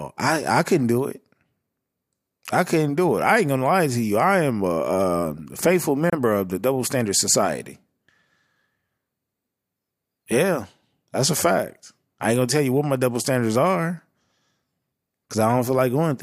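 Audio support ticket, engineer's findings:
Gap at a join of encoded pieces, 6.10 to 6.13 s, in speech. Gap of about 28 ms between "am a a faithful" and "of the", with smeared edges; the sound resumes where it stopped. Probable component: segment concatenation. Separately encoded pieces were joined without trimming the encoder start delay or last-frame padding.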